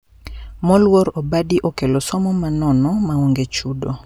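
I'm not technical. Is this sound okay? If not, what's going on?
Yes, nothing in this recording points to a technical problem; the signal holds steady the whole way with no gaps, distortion or sudden jumps in level.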